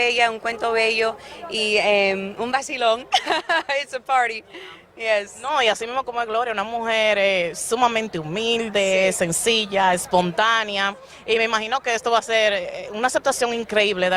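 No technical faults are audible.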